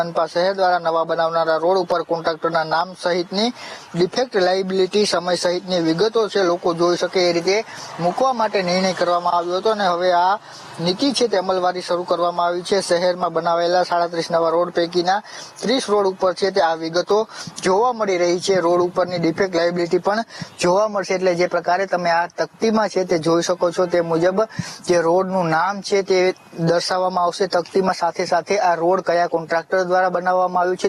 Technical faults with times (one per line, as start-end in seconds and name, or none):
0.00-30.88 gain pumping